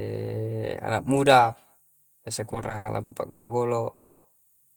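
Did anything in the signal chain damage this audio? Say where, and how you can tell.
Yes, the damage happened at the network and jitter buffer stage. The repeated stalls (stutter) run from 2.51 to 3.51 s. There are eleven short hitches in that second. Each one holds or smears the last sound instead of moving on. The longest lasts about 200 ms. Together they fill 440 ms, so almost half the span is stretched-out sound. Nothing drops out, though. Packets kept arriving late, so the buffer ran dry again and again.

A single call audio freeze follows from 3.93 to 4.26 s. For 310 ms the last sound hangs and fades as a buzz or hiss. It never drops to silence. Then the speech resumes exactly where it stopped. No content is skipped, so the clip now runs 310 ms later than before. The likely cause is a burst of packets held up in transit. That would empty the jitter buffer until they arrived.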